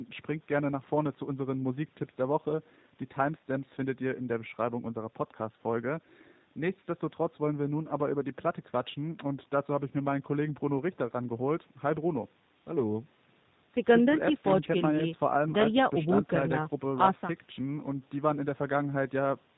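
G.729 codec damage runs throughout the speech. The sound fits a low-rate 8 kbit/s voice codec that rebuilds each 10 ms frame from a vocal tract filter, a pitch predictor and a few pulses, discarding everything above 4 kHz. The result is muffled and plainly audible, slightly rough and synthetic.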